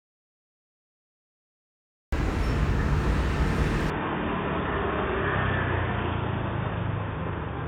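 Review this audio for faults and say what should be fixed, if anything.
The clip opens in an audio dropout to silence already under way, dead silence with no room tone until about 2.13 s. It sounds like the input likely got lost and the recorder just kept writing nothing. Monitoring input levels during capture would catch a dead link early.

From 3.9 s to the end, it's an input switched to a poorer device: the sound goes dull, with nothing above 3.6 kHz, roughly 5 dB quieter, and a new noise floor around 50 dB down. There's no gap at the change, which is likely an automatic device switch. Locking the input device in the system settings would stop that.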